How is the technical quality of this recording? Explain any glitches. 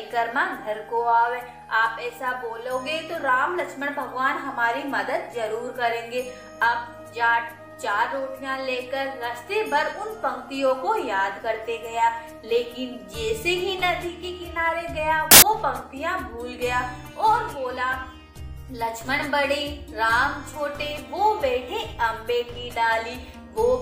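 The recording has one clear glitch. From 15.31 to 15.42 s, roughly a tenth of a second, the sound is replaced by a burst of loud, harsh broadband noise. This is samples built from the wrong bytes: the reader assembled each sample's bytes in the wrong order or alignment. The rapidly fluctuating low-order bits end up as the large part of every value. The result is harsh noise that swamps the signal.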